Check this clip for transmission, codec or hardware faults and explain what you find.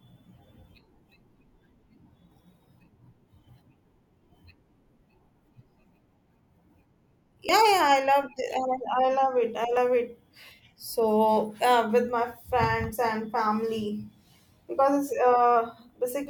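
Two brief dropouts are audible in this speech. At 7.49 s and 9.77 s the speech jumps forward. The likely cause is a dropped buffer (overrun): the capture software fell behind, the hardware overwrote a block of samples before it was read, and the audio on either side was spliced together with no gap. Roughly 30 ms goes missing each time, so there is no silence, just an abrupt skip.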